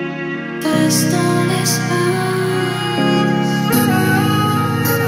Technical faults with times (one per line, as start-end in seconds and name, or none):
none